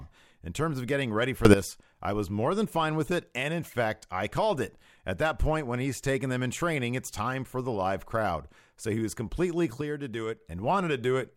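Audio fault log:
1.45–1.54 s, sudden gain jump: right after "of getting ready for" the level leaps up by about 15 dB, background hiss included, and settles before "I was more than". Likely a gain step applied between two samples with no ramp, so everything shifts at once.
9.81–10.41 s, sudden gain jump: after "he was completely" the sound and its noise floor drop together by about 6 dB for roughly 0.6 s, again with a likely unramped gain change.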